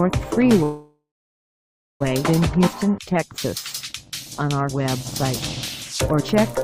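Call audio freeze, 0.63 to 2.02 s: the last sound hangs and fades to about a second of silence, then resumes intact, likely from late packets emptying the jitter buffer.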